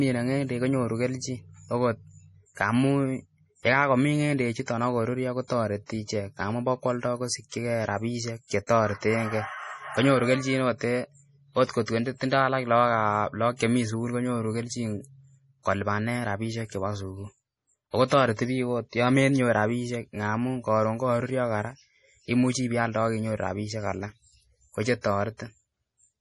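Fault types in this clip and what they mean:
MP3 compression: The speech has no content above 11.5 kHz and sounds watery and swirly throughout. Sibilants carry metallic chirps as weak frequency lines flicker on and off between frames. This is likely heavy MP3 coding, fitting a bitrate near 32 kbps.
pre-echo: Three attacks are preceded by a brief hiss, at 8.67 to 8.69 s, 11.85 to 11.88 s and 18.08 to 18.11 s. Each lasts about 25 to 34 ms. Coding noise meant for the loud onset spills into the quiet moment before it, softening the attack.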